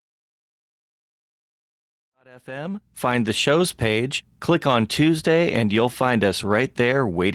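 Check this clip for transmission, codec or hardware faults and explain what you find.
No transmission, codec or hardware faults.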